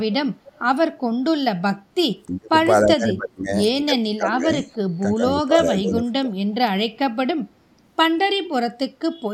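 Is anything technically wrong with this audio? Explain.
Yes. Short bursts of echo leak occur at 0.47 to 0.52 s and 7.71 to 7.75 s. A copy of the speech returns late, by 297 ms and then 322 ms, at about 25 dB and then about 40 dB below the speech. The likely cause is an echo canceller letting loudspeaker pickup through. On a spectrogram these show as brief, weak repeats of earlier harmonic patterns, and the waveform barely shows them.

Speech suppressed in double talk affects four stretches: 2.27 to 2.57 s, 2.83 to 3.55 s, 3.83 to 4.66 s and 5.12 to 6.35 s. The level falls by about 20 to 30 dB at its deepest. The likely cause is an echo canceller that could not separate the talker from loudspeaker echo and turned both down. The waveform envelope caves in suddenly, and the spectrogram shows the speech energy fading in blocks.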